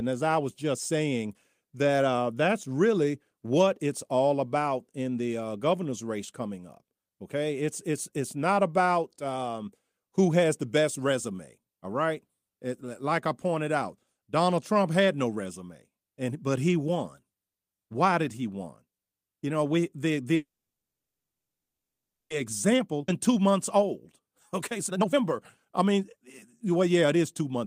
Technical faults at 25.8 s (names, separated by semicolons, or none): jitter buffer speed-up